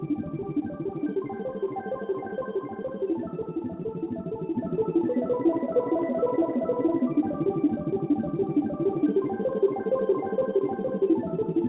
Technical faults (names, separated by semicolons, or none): none